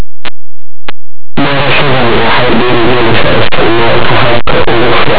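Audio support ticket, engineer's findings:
Linear audio read as companded: 8-bit linear speech decoded as mu-law throughout. Samples just on one side of zero map to extreme outputs while the other side stays small, so quiet passages become very loud, harsh distortion. Probable component: decoder or format header mismatch.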